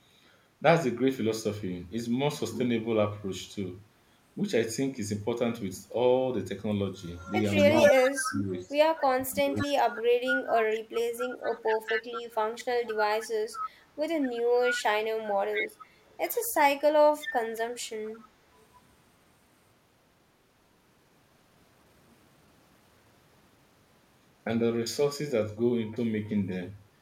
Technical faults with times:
7.15-8.69 echo leak
7.73-11.35 speech suppressed in double talk
9.55-9.95 echo leak
10.49-10.80 echo leak
11.43-13.70 echo leak
14.74-14.82 echo leak
15.53-16.17 echo leak
17.20-18.64 echo leak

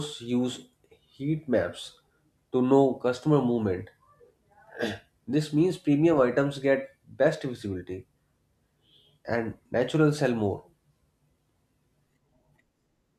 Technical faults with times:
none

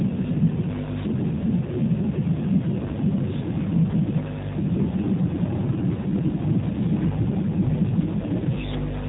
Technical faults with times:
0.00-9.08 G.729 codec

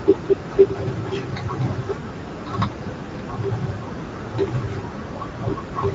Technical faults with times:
0.00-5.95 Speex codec
5.31-5.35 VoIP packet loss concealed by the speech codec

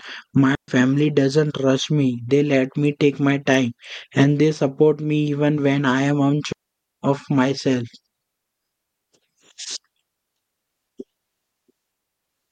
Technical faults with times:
0.55-0.68 digital wireless dropout
6.52-6.93 digital wireless dropout

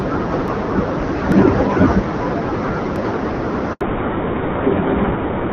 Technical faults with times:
0.48 dropped buffer (overrun)
1.32 dropped buffer (overrun)
2.96 dropped buffer (overrun)
3.73-3.81 handover gap
3.81-5.53 fallback to narrowband
5.04 dropped buffer (overrun)

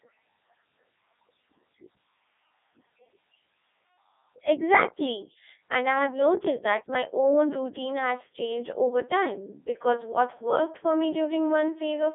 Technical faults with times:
0.00-12.14 Codec 2 vocoder

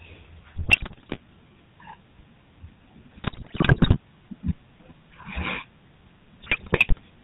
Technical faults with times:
0.00-7.24 GSM full-rate codec
0.52-1.19 GSM bit errors
3.24-3.96 GSM bit errors
6.42-7.01 GSM bit errors

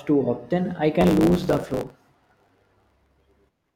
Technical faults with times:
1.00-3.75 block size mismatch (truncated)

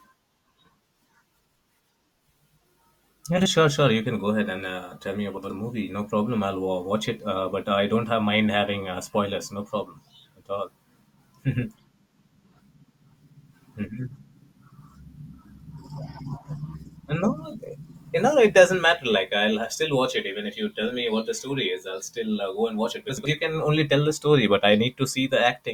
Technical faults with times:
3.37-3.47 frames out of order
5.37-5.50 frames out of order
23.09-23.29 frames out of order

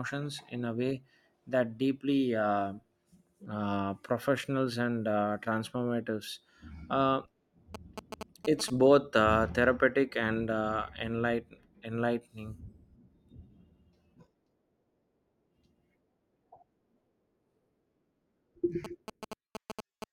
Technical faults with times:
7.75-8.70 GSM signalling bursts
18.84-20.04 GSM signalling bursts

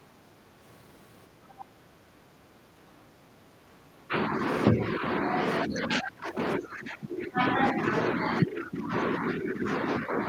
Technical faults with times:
1.59-1.64 other side's voice leaking through
4.08-4.12 speech suppressed in double talk
4.73-5.94 speech suppressed in double talk
6.60-7.58 speech suppressed in double talk
8.63-8.91 speech suppressed in double talk
9.33-10.14 speech suppressed in double talk

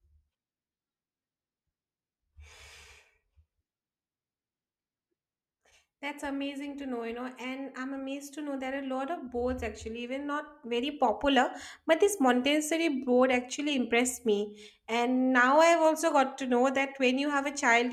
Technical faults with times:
10.63-17.93 sudden gain jump

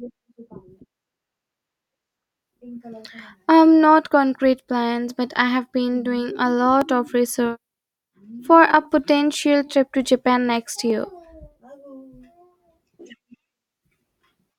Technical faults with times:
6.81-10.90 periodic USB or driver dropouts

